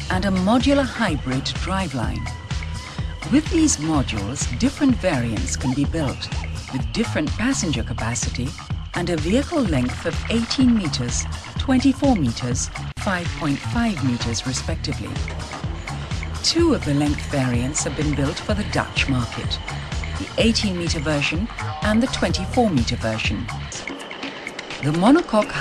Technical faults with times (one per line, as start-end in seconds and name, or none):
none